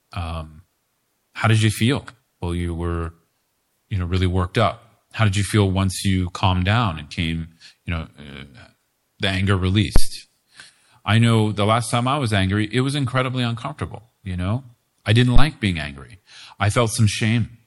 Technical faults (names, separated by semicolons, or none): phantom power thump